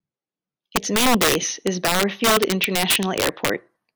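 Throughout the speech, integer overflow: about 7 dB too hot, a small fraction of peaks wrap to the opposite sign, giving violent cracks far sharper than clipping's flattened buzz.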